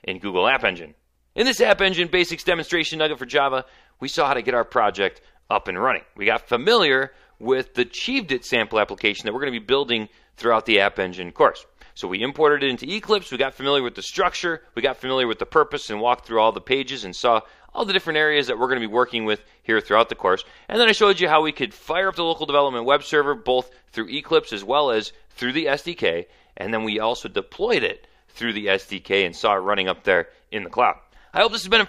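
Nothing in the signal points to a technical fault at any point in the recording.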